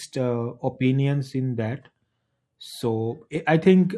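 Speech that sounds dull and gurgling throughout, with granular, flickering upper frequencies, points to MP2 compression, likely at a low rate around 80 kbps where upper sub-bands drop out. At 3.36 s a brief burst of noise blips is DAB burbling: a small fraction of bit errors slipped past error correction, corrupting several frames of sub-band data.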